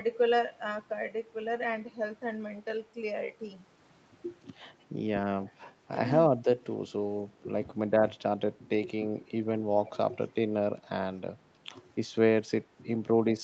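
A speech recording carried over a call path limited to 8 kHz, consistent with Opus at around 40 kbps, with faults at three points. At 8.1 to 8.21 s and again at 9.96 to 10.14 s, the echo canceller likely mistook overlapping talk for echo and suppressed speech in double talk, dipping the voice by about 20 dB and then about 25 dB for about 0.1 s and then about 0.15 s. Between 9.86 and 9.97 s, a likely echo leak from a loudspeaker returns a faint copy of the voice, delayed by 279 ms and about 25 dB below the speech.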